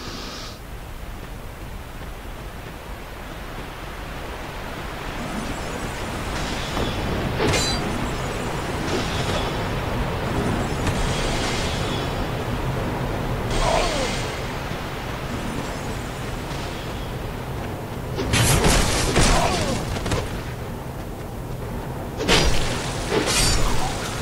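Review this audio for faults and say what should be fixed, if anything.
Low bit depth with dither runs throughout the clip. The sound has been reduced to 8 bits, with dither added before rounding, so the quantisation error becomes a constant, even hiss roughly 25 dB below the signal rather than distortion. Keep processing and export at 16 or 24 bits, and reduce bit depth only at the final delivery stage.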